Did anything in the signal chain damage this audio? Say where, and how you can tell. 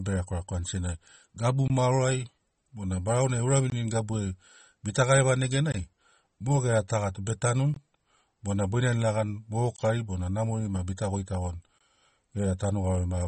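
Yes. The top end stops dead at 8.4 kHz across the whole clip, with a swirly, watery texture on the speech. That points to MP3 compression at the codec stage, likely a low bitrate around 32 kbps, starving weak frequency lines and chopping the treble.

There's also a gap between chunks, probably at storage or playback. Hard-edged holes of about 21 ms land every 2 s, at 1.68, 3.70, 5.72, 7.74, 9.76 and 11.78 s. The first one comes right before "maoro ai bona barau". A late start or padding on each chunk would explain it.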